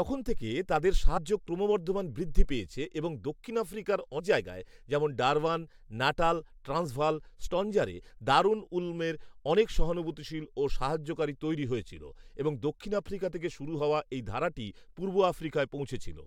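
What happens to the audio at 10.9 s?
Nothing goes wrong at 10.9 s; the speech carries on intact through that moment.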